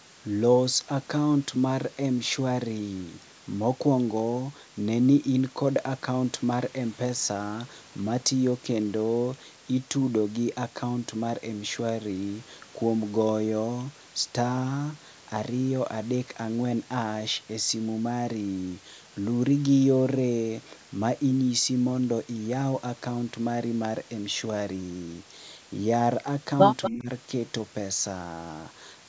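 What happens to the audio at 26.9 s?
At 26.9 s an echo leak is ending. From 26.82 to 26.91 s a delayed copy of the speech, about 237 ms behind and roughly 10 dB below it, gets through. The likely cause is a loudspeaker on one side of the call whose echo canceller failed to remove its own playback.

Overlapping it, the speech is suppressed in double talk from 26.9 to 27.09 s. The voice dips by as much as about 15 dB over roughly 200 ms. This is likely the echo canceller, unable to separate talker from echo, attenuating both.

Running through the whole moment is low bit depth with dither. The signal carries only 7 bits, and the rounding error, spread by dither, becomes a steady, even hiss about 25 dB below the signal, with no audible distortion.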